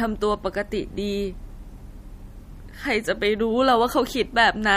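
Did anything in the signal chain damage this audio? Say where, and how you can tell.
Yes, the codec stage: throughout this speech, nothing above about 15.2 kHz, with watery, swirly artefacts and smeared attacks, likely MP3 compression at a low bitrate, around 48 kbps.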